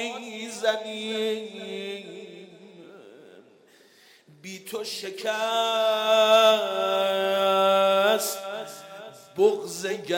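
No technical faults can be heard anywhere in the recording.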